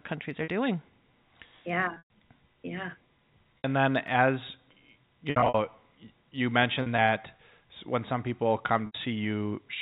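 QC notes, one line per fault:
0.44–0.48 s, 1.94–2.08 s, 3.58–3.64 s, 5.30–5.55 s, 6.82–6.99 s, 8.86–8.95 s (just after "when some people"): packet loss with pitch repetition. The receiver bridges each gap by repeating the last pitch period. The 40–80 ms losses sound like a briefly held, buzzy tone. The longest unbroken run, 120 ms at 1.94 s, fades toward silence before a cross-fade brings the sound back. At 1.94, 5.30 and 6.82 s the losses come in scattered runs, which fits 20 ms packets.
4.08 s: block of digital silence. About 2.65 ms of sound cuts out and returns with no fade. The hard edges give a single tick rather than an audible hole, which fits an output buffer that was not filled in time.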